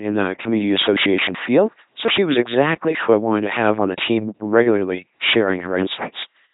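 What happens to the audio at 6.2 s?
At 6.2 s the speech is still under the LPC-10 vocoder distortion that runs through the whole clip. Each frame drives a short all-pole vocal tract filter with either a pulse train or noise, giving a heavily damaged, buzzing robotic voice, consistent with a 2.4 kbit/s rate, with nothing above 3.8 kHz.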